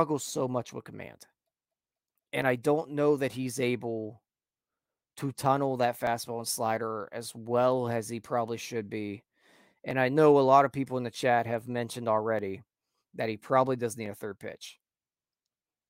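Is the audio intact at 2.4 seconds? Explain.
No. Dropped samples at 2.42 s: the waveform jumps abruptly from one value to a later one, likely because under a millisecond of samples went missing from the stream. Too brief to remove any sound, it is heard as a single sharp click.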